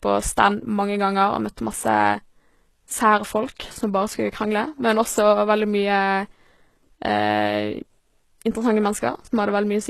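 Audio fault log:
Throughout, HE-AAC compression: the speech sounds heavily processed, with s sounds turning gritty and lispy and the treble synthetic, stopping near 12.3 kHz. This is likely HE-AAC at a low bitrate, around 16 kbps, rebuilding the upper band from copied lower harmonics.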